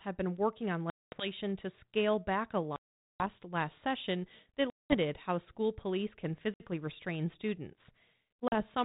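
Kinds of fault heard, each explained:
Packet loss on an ADPCM call: lost packets become hard-edged silent holes, up to about 440 ms, as flat gaps in the waveform; speech resumes slightly distorted while the decoder's predictor re-locks.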